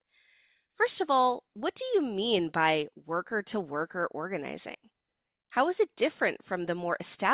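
No technical faults can be heard anywhere in this audio.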